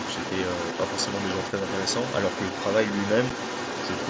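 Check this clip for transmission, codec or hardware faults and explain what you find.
Two faults stand out: the far end leaking back in, and a tiny dropout near the end.

Other side's voice leaking through runs the whole clip, from 0 to about 4 s. A second voice sits only a little below the talker, roughly 5 dB down. The likely cause is the far end playing on a loudspeaker and the echo canceller not fully removing it from the mic.

Unconcealed Bluetooth headset packet loss hits at 3.30 s. There's a hard-edged 7.5 ms hole, which fits a single lost frame between headset and phone. Nothing fills the gap, so you get a brief break with abrupt edges. The mSBC wideband link itself tops out at 8 kHz, as expected.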